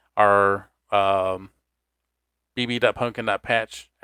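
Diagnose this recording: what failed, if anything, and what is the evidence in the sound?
Nothing in the chain has failed: the speech holds continuous and intact throughout, and no stage leaves audible evidence of a fault.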